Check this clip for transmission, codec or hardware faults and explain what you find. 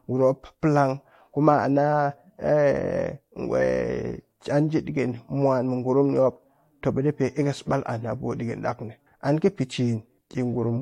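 One fault turns up in this speech clip: compressed frames skipped at 7.72 s. At that point roughly 20 ms of audio never reaches the output, most likely because the decoder lost or rejected a damaged frame and jumped to the next good one. The absence of any silent gap sets it apart from a packet dropout.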